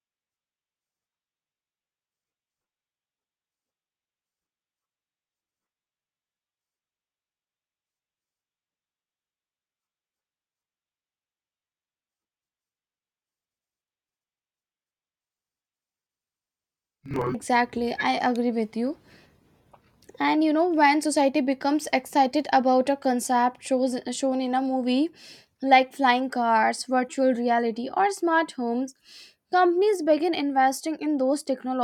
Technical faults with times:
0.00-17.35 interleaved audio read as planar

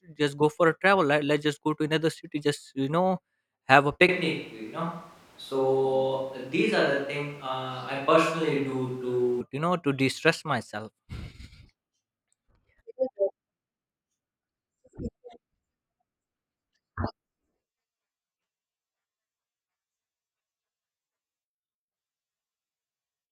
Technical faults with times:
4.09-9.41 switch to a distant microphone

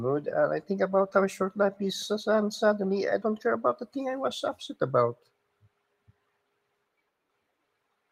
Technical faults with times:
none

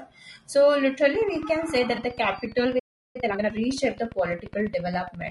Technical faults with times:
0.00-5.30 low-delay AAC compression
1.15-5.29 train of clicks
1.95-1.99 AAC frame loss with concealment
2.79-3.16 playback stall
3.16-3.50 time-compressed catch-up

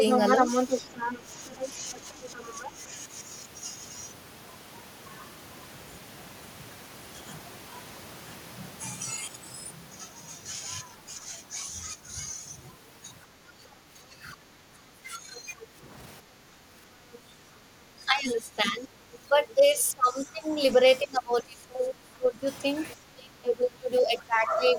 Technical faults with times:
0.00-2.71 other side's voice leaking through
0.89-2.73 speech suppressed in double talk
13.44-13.80 background gated by the echo canceller
14.08-15.59 speech suppressed in double talk
15.60-17.18 other side's voice leaking through
16.22-17.39 background gated by the echo canceller
17.97-24.79 speech suppressed in double talk
19.13-19.18 other side's voice leaking through

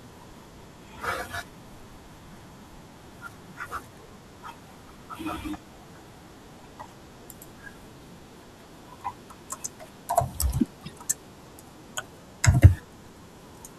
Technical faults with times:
4.60-4.68 corrupt frame decoded
6.57-6.65 corrupt frame decoded
10.83-10.95 corrupt frame decoded
13.06 corrupt frame decoded

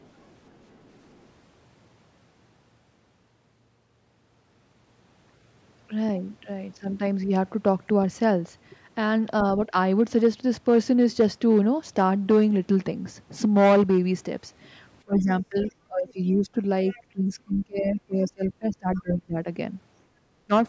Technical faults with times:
0.00-1.27 other side's voice leaking through
9.68-9.74 speech suppressed in double talk
15.05-16.59 speech suppressed in double talk
15.41-15.72 other side's voice leaking through
16.88-17.65 other side's voice leaking through
17.12-19.47 speech suppressed in double talk
18.94-19.01 other side's voice leaking through
20.46-20.51 speech suppressed in double talk

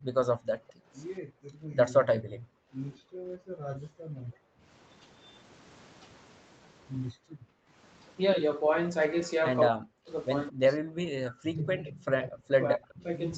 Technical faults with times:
0.00-4.64 background gated by the echo canceller
0.68-0.73 echo leak
2.94-2.99 echo leak
7.14-7.73 background gated by the echo canceller
9.70-13.37 speech suppressed in double talk
11.80-12.34 echo leak

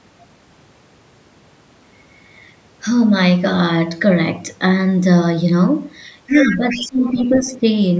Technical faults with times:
6.27-7.64 speech suppressed in double talk
6.32-6.85 other side's voice leaking through
7.32-7.40 other side's voice leaking through

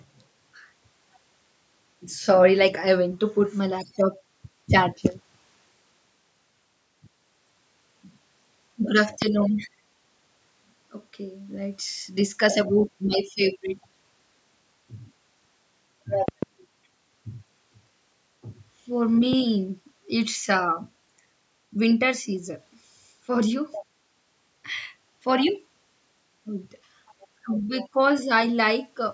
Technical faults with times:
9.22-9.24 loud pop
16.28-16.45 loud pop
19.33-19.35 loud pop

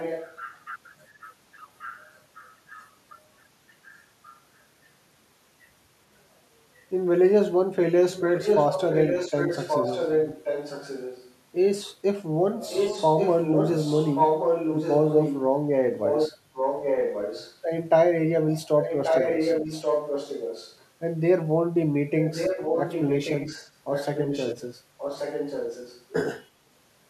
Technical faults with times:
0.00-0.65 echo leak
1.78-2.93 echo leak
8.12-11.35 echo leak
12.70-15.41 echo leak
15.94-17.57 echo leak
18.82-20.77 echo leak
22.23-26.05 echo leak

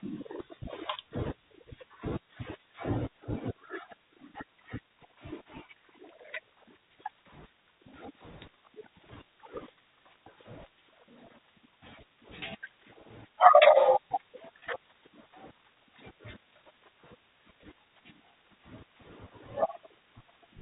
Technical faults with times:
14.60 packet loss with pitch repetition

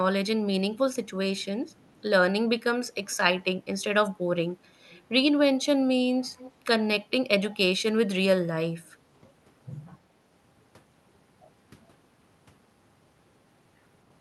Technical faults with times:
1.69-2.02 echo leak
3.10-3.16 echo leak
4.90-5.01 echo leak
6.39-6.52 echo leak

